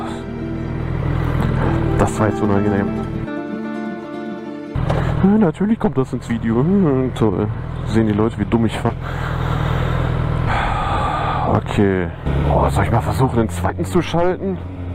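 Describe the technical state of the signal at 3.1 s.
At 3.1 s the signal is intact, with no dropout, distortion, glitch or other audible fault.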